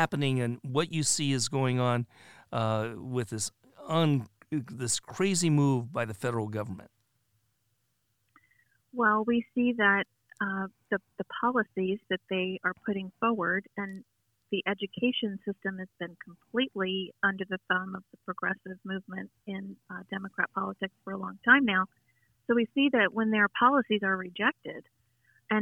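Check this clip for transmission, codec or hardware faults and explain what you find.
Nothing in the signal points to a transmission, codec or hardware problem; the audio is continuous and steady throughout.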